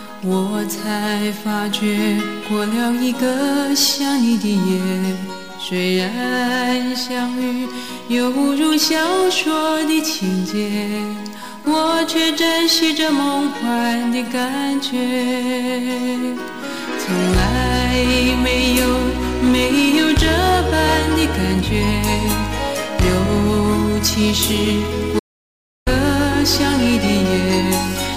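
Throughout, the signal is driven about 10 dB beyond what a stage in the chain can pass, so a few percent of samples have their peaks cut flat. This hard clipping adds high harmonics, heard as a harsh fuzz riding on every loud moment.

From 8.72 to 8.74 s, what sounds like a single compressed frame with damaged bits was decoded anyway, putting energy at wrong frequencies for its length. This corrupt frame decoded comes through as a brief chirp or blip.

From 25.19 to 25.87 s, the sound cuts out for about 0.67 s into silence, with no room tone, then returns mid-flow. This audio dropout to silence is likely from the input being lost while silence kept being written.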